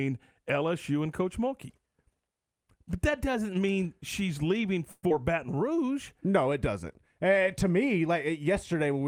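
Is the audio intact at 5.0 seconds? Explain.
No. What is likely a long network dropout hits from 4.91 to 5.12 s, just after "doesn't mean she's leaving". Audio stopped arriving, so the receiver covered the gap by stretching the last sound into a buzz that fades over about 186 ms, followed by a brief 10 ms silence. About 80 ms of the speech never plays at all, and when the audio returns its timing has shifted by around 50 ms.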